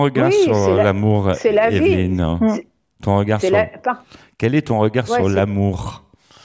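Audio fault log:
Nothing stood out on listening to the speech in this recording.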